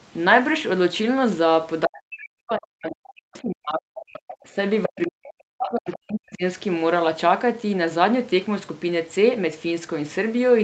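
From 1.86 to 4.09 s the talker gets pushed way down, dropping by around 40 dB at the deepest and chopping out about two seconds in pieces. That's speech suppressed in double talk: with both ends talking at once, the echo canceller likely couldn't separate the talker from the loudspeaker echo and clamped down on everything. Right after, from 4.13 to 4.48 s, the other side's voice leaks through, faint at roughly 20 dB under the talker. This is likely the same canceller failing the other way and leaving some of the far end's loudspeaker playback in the mic signal.

There's a small dip of about 5 dB from 4.51 to 4.58 s. Then at 4.83 to 5.06 s the leak gets loud, only about 5 dB below the talker. From 4.88 to 6.43 s the talker is crushed again by around 40 dB, for roughly a second and a half. During that stretch one more short scrap of the other side slips through at 5.91 to 5.97 s, about 20 dB down. 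Throughout, the call path's Opus coding keeps everything under 8 kHz.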